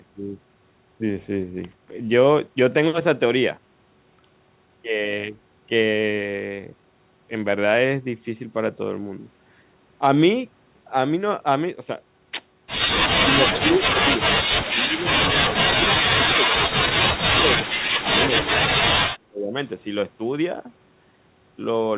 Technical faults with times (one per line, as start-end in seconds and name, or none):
13.20-16.80 speech suppressed in double talk
17.28-18.90 speech suppressed in double talk
19.28-19.56 speech suppressed in double talk
19.62-19.69 echo leak